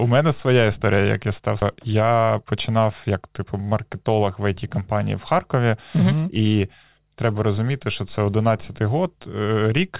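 A speech clip with two timing problems, both likely from the jitter buffer side of a call. Right after "історія як я став", at about 1.62 to 1.64 s, there's a skip ahead. Roughly a second of audio just isn't there, and playback jumps straight to later material with no filler, so the two sides butt together almost seamlessly. That points to the buffer overflowing and throwing away a chunk it had queued up, cutting the delay by about a second in one go. Then from 1.75 to 3.62 s you get a jitter buffer speed-up. The talking runs at about 112% speed while the pitch stays put, so it comes across a bit rushed. The receiver is trimming tiny pitch-period-sized slivers over and over to bring the backlog down, and it shaves off something like a fifth of a second in total. Underneath all of it there's nothing above 4 kHz, which fits a G.711 mu-law call codec.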